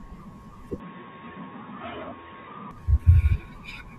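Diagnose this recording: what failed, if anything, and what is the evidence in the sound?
The input likely switched to a poorer device at the driver stage. From 0.8 to 2.71 s the speech turns dull and quieter, with nothing above 3.8 kHz.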